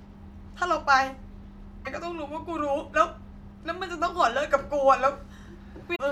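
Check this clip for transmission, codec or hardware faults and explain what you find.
Two short faults, both damaged data in a compressed stream, at 1.82–1.87 s and 5.92–6.00 s. Corrupted bytes make the decoder misread frames and lose sync, giving a brief chirp, squawk, click or short hole in the speech. On a spectrogram each shows as a brief disruption, with jagged waveform discontinuities.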